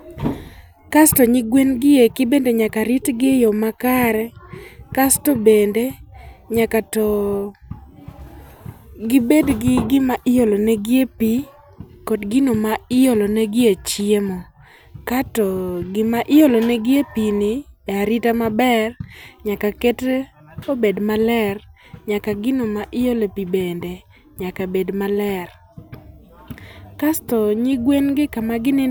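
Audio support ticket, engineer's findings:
No audible faults found in the speech path on listening; nothing to attribute to any component, no action required.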